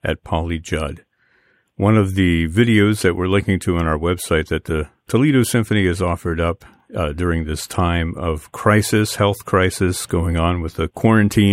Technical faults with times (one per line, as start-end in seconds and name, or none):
none